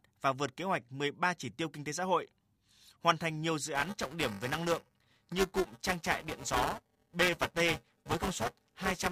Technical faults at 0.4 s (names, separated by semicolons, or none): none